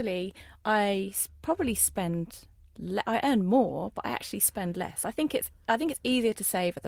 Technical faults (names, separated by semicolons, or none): none